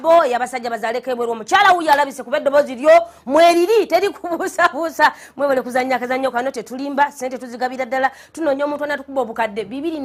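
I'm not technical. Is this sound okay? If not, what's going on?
Yes, nothing is wrong here.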